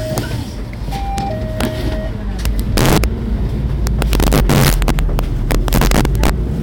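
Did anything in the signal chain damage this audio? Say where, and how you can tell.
Yes: integer overflow at 0.18, 1.18, 1.61–1.65, 2.45–3.04 and 3.87–6.30 s, from sample-format conversion. Peaks up to about 6 dB over full scale wrap to the opposite sign, giving sharp cracks.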